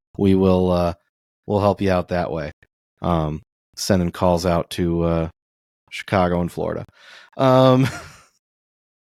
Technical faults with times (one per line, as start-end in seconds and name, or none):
none